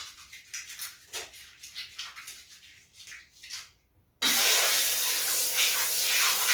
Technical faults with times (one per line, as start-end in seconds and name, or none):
0.00-6.53 Opus compression